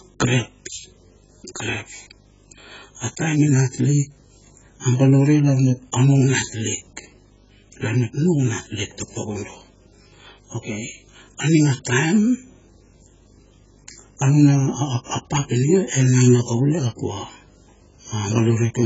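A video or display buzz runs through the whole speech clip. A screen or video cable is coupling into the audio path. The result is a steady buzz at 50 Hz, the picture's field rate, with a rasping hash riding above it. A thin, very high tone sits at 15.6 kHz, the line rate. The buzz stays around 30 dB below the speech. It never drops out, even in pauses.

From start to finish the speech sounds dull and smeared. Nothing is heard above 7.6 kHz. Sibilants turn fizzy and hollow. Sustained sounds warble, and the texture is heavily damaged throughout. This is likely AAC compression, specifically AAC-LC at a very low bitrate, around 12 kbps. The encoder has too few bits to spend. It lowers the cut-off and leaves gaps in the spectrum.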